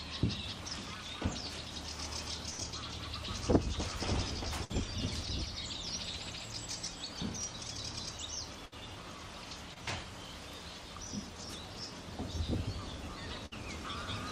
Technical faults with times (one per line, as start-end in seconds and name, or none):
2.49-2.60 burst of packet loss
4.64-4.72 burst of packet loss
8.66-8.74 burst of packet loss
9.74-9.78 short concealed packet loss
13.46-13.53 burst of packet loss